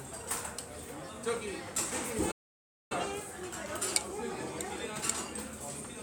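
At 2.31 s the sound cuts off abruptly and stays silent until 2.92 s, a gap of about 0.59 s, before carrying on. This is a playback stall, likely the player running short of buffered data or having its output thread held up, so nothing reached the output until it recovered. On a waveform the trace drops to a flat line for that span, and a spectrogram shows a clean vertical band empty at every frequency, with sharp edges on both sides.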